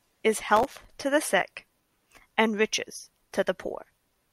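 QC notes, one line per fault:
0.57–0.90 s, processor overload crackle: for about a third of a second the speech picks up a gritty, tearing crackle that stops as suddenly as it starts. The processor is falling behind and missing one buffer deadline after another, and each miss drops in a tiny hard-edged gap of silence. The fine grain of the crackle points to very short buffers, a few milliseconds each, with somewhere around twenty of them lost over that stretch before the load eases.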